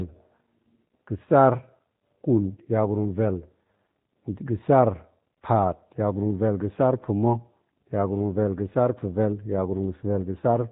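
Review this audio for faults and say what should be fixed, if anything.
The speech carries G.729 codec damage from start to finish, and it is plainly audible. The codec rebuilds each 10 ms frame from a vocal tract filter, a pitch predictor and a few fixed pulses instead of the original waveform. The result sounds rough and slightly synthetic, and nothing above 4 kHz survives, so sibilants lose their edge. The character fits an 8 kbit/s G.729A stream. To prevent it, capture or transfer the audio over a wideband path such as G.722 or Opus rather than narrowband G.729.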